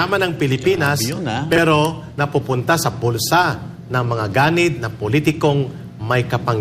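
At 1.52 to 1.58 s the chunks play out of order: one 20 ms chunk arrives two chunks late and plays after the two that should follow it. The sound briefly jumbles. The waveform shows three abrupt steps.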